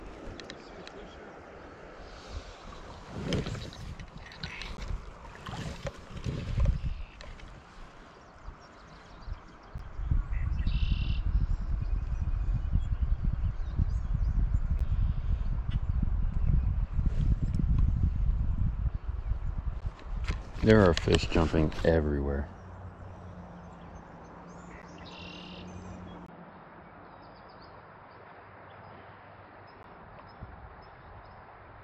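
Short, hard-edged holes of about 12 ms break the audio at 4.77, 9.78, 14.79, 19.81, 24.82 and 29.83 s. This is a gap between chunks: the joins recur roughly every 5 s, which fits the stream being handled in 5 s pieces with silence inserted at each seam. Unlike packet loss or dropouts, nothing is missing: the audio resumes exactly where it stopped, and the spacing is strictly regular. From 26.26 s to the end the character changes abruptly after a silence of about 20 ms. Everything above 5.2 kHz disappears, making the sound dull and boxy. The level drops by about 5 dB, and a new noise floor roughly 50 dB below the signal appears. The likely cause is an input switched to a poorer device. A plain bandwidth or codec change would narrow the band, but would not shift the level, noise and tone together at a single seam.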